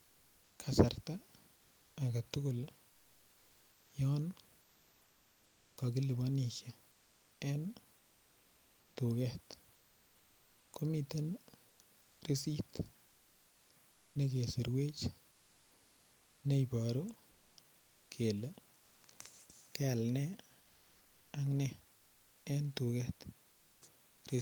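The sender likely stopped transmitting during pauses, Opus DTX-style, so the receiver put comfort noise in place of the background at 2.89–5.77, 6.91–8.95, 11.69–12.21, 13.07–14.15, 15.31–16.43, 17.31–18.09 and 23.49–23.81 s (after "en duket"). The room noise turns flat and featureless, and at 15.31–16.43 and 23.49–23.81 s about 1 dB quieter.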